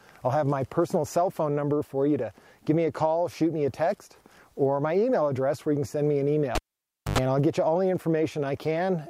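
A live cable was pulled out and plugged back in between 6.55 and 7.18 s. The pull leaves a sharp pop at 6.55 s, then the audio drops to near silence for about 0.58 s while the circuit is open. As the plug goes back in, only the tip makes contact at first, picking up roughly 0.1 s of 50 Hz mains buzz before the connection seats fully. A second pop at 7.18 s marks the audio coming back.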